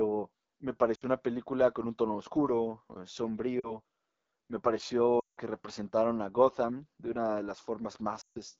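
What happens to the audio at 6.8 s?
At 6.8 s, like everywhere else in the clip, the speech carries AMR wideband (HD Voice) codec damage: that raspy, rough model-based texture points to a low mode like 8.85 kbit/s.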